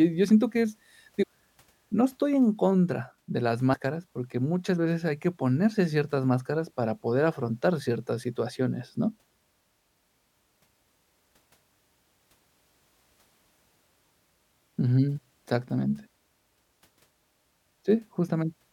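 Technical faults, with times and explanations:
1.22–1.24, 3.73–3.75 and 15.17 s, compressed frames skipped: speech jumps ahead about 0.2, 0.07 and 0.15 s, whole 26.1 ms frames lost. Overlapping frames smear each join into a soft blip.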